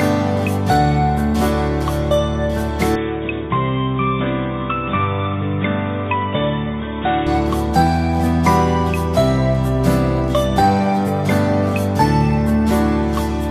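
Input switched to a poorer device, from 2.96 to 7.27 s: the sound abruptly turns dull and boxy, with nothing above 3.8 kHz, drops by about 5 dB, and picks up a faint new noise floor well below the signal. There is no gap at either switch. The band-limited tone and level shift most likely come from the recording input moving to a lower-quality microphone or a headset call profile, then switching back.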